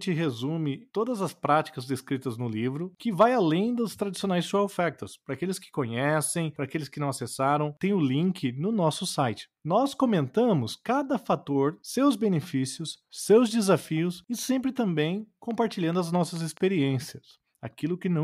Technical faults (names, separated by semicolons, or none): train of clicks